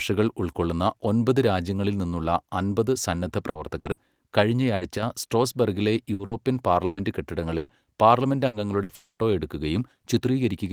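Right after "ഒമ്പത് രാജ്യങ്ങളിൽ നിന്നുള്ള അമ്പത്", bursts of packet loss occur at 3.49, 3.79, 3.91 and 4.75 s. Each bridges about 60 ms with a fading continuation of the last sound, then skips about 60 ms of audio.

At 4.97–5.03 s the level dips abruptly by about 6 dB, likely one channel dropping out before the mono sum.

From 6.13 to 7.72 s, repeated packet loss leaves four patched holes, the longest 120 ms, covering about 23% of the stretch and giving choppy sound with pieces missing.

Further packet-loss bursts at 8.47 and 8.83 s repeat the 60 ms fill-and-skip pattern.

From 8.95 to 9.22 s a likely long network dropout leaves a fading continuation, then about 110 ms of silence, before the audio resumes with material missing.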